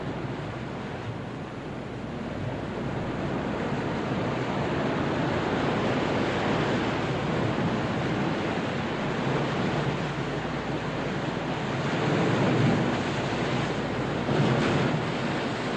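Sound recording; no technical faults to report.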